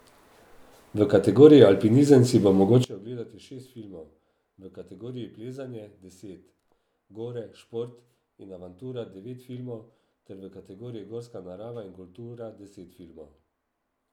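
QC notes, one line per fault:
2.84 s to end, one channel inverted: from just after "si bo" onward, one side of the stereo pair has likely had its polarity flipped, so anything identical in both channels cancels when the two are combined. The centred speech collapses, dropping by about 21 dB, and what survives is only the small difference between left and right, heard as a faint residue of the voice.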